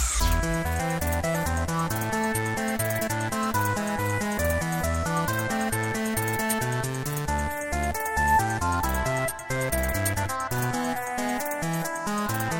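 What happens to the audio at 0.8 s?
Compressed frames are skipped at 0.8 s: a few frames of the encoded stream, consistent with 20 ms frames, never reach playback, so the audio jumps ahead by roughly 70 ms. The splice where the surviving frames meet is heard as a sudden discontinuity.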